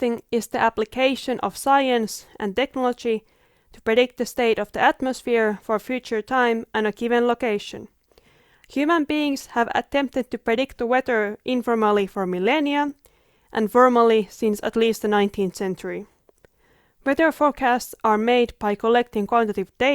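A speech recording with nothing technically wrong to point to. No fault can be heard anywhere in it.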